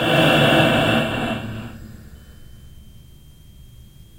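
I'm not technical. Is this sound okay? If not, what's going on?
No. A switching supply whistle starts at 2.15 s and runs to the end: a faint, high whine between about 3.0 and 3.2 kHz. A switching power supply is running at a pitch you can hear, and the recording picked it up.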